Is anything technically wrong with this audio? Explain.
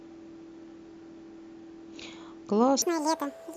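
Yes. From 2.82 s to the end, the speech abruptly turns high and hurried, as if on fast-forward, with its pitch jumping by around ten semitones and everything rushing past at twice the pace. This is a section at the wrong speed. Speed and pitch shifting together at one point suggests the final stretch was likely played back against the wrong clock, reading samples at double the rate they were recorded at.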